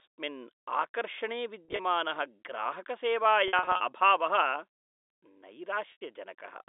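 Packet loss with pitch repetition hits three times: at 1.65 to 1.79 s, 3.48 to 3.80 s, and 5.92 to 6.01 s. The receiver patches each gap by looping the last pitch period, so the sound turns briefly buzzy and held. It's worst in the middle stretch, where 190 ms drops out.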